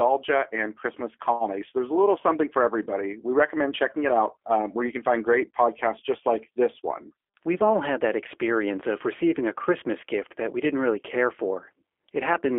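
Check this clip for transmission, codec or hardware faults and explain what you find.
One fault runs through the whole clip: G.729 codec damage. The speech sounds rough, thin and synthetic, confined to roughly 300 Hz to 3.4 kHz, as the 8 kbit/s G.729 codec rebuilds it from a filter, pitch predictor and sparse pulses.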